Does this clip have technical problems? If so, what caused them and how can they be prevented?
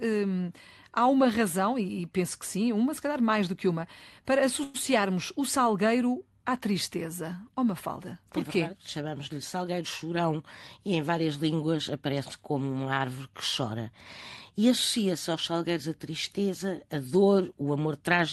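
Yes. Call audio freeze at 4.63 to 4.76 s, just after "do que uma para": packets were likely held up and the jitter buffer ran dry, so the receiver stretched the last sound into a fading buzz for about 108 ms. The speech then resumes where it stopped, with nothing lost. Prevention: use a more stable network path or a larger jitter buffer target so brief delivery stalls are absorbed.

Jitter buffer speed-up at 9.53 to 10.01 s and 17.76 to 18.18 s: after a backlog built up, the receiver trimmed pitch-period slices, about 50 ms in all each time, so the speech runs 10 percent faster at unchanged pitch. Prevention: reduce packet bunching on the network so the buffer rarely overfills and needs to drain.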